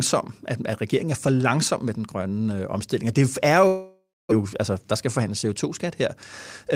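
Speech, interrupted by a long network dropout from 3.67 to 4.33 s, likely from lost packets: the last sound smears into a fading buzz, then about 260 ms of silence. The waveform flattens, and the spectrogram shows a blurred tail then a blank gap. Roughly 600 ms of speech never returns, and resumption lands about 15 ms later.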